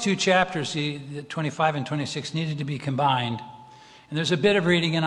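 No technical faults can be heard anywhere in the clip. Nothing in the signal breaks, stalls or changes character at any point.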